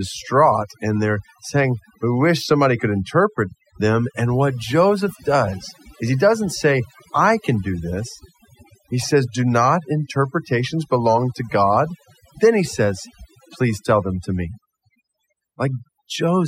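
From start to finish, overdone noise removal strips bands sitting near the noise estimate, taking quiet speech detail too: near-silent background with twinkling specks.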